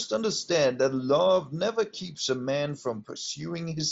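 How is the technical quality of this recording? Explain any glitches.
Listening closely to the speech, nothing stood out as a technical glitch, and the bandwidth stopping a little below 8 kHz is simply what the Bluetooth mSBC headset link passes.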